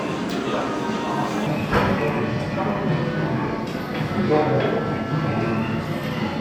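From 1.47 s to the end at 6.41 s, the sound turns abruptly deeper and more sluggish, about five semitones down and running at 0.717 times its proper speed. This section at the wrong speed was likely played against the wrong clock, dragging pitch and tempo down together.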